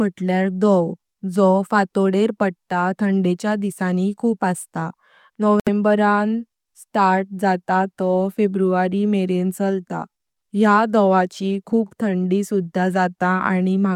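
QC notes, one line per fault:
5.60–5.69 s, Bluetooth dropout: the speech cuts to silence for roughly 90 ms, then picks up further along as though it had kept playing underneath. About 70 ms of material is simply missing rather than delayed, so the resumed sound skips ahead instead of continuing where it stopped. The likely cause is wireless packets reaching the headphones too late to play and being discarded, leaving a hole until good data arrived.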